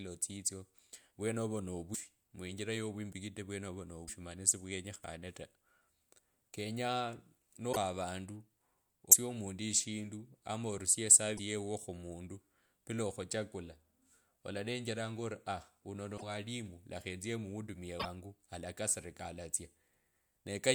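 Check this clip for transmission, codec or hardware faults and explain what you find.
Seven brief glitches break up the speech: short chirps, noise bursts or tiny holes, each 28 to 64 ms, at 1.93, 4.07 (just before "mani siwenyekhane"), 7.72, 9.11, 11.37 (between "ama orusie" and "yeuo khumundu bila okhuchakula"), 16.17 (after "aa wuno") and 17.99 s, with the audio skipping ahead each time. This is likely a broken MP3 bit reservoir: after frames were dropped, the next frame's borrowed data came from the wrong frame, with the stream using 24 ms frames.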